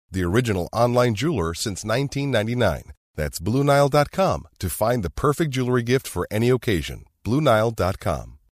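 Nothing in this recording of speech stood out as a technical problem on listening.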